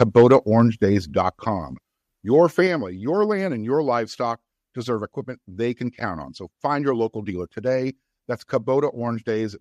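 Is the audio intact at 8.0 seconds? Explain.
Yes, the speech at 8.0 seconds is intact, with no dropout, click, distortion or other technical fault at that moment.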